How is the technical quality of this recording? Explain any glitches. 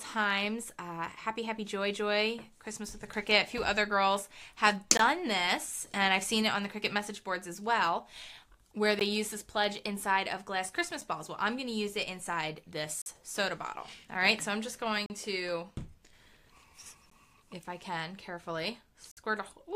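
The recording is interrupted by brief dropouts. Gaps between stream segments occur at 4.97, 8.99, 11.01, 13.02, 15.06, 17.10 and 19.11 s. Mismatched timestamps on 2-second segments leave holes, filled with silence, lasting 7 to 55 ms. Each one is heard as a hard-edged click-like break and appears as a vertical blank stripe on a spectrogram and a near-flat line in the waveform.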